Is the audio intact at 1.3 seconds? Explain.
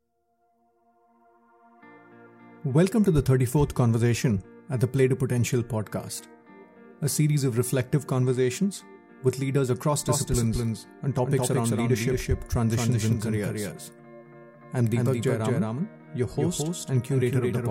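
Yes, the audio is intact at 1.3 seconds, with nothing at that moment breaking the continuity of the sound.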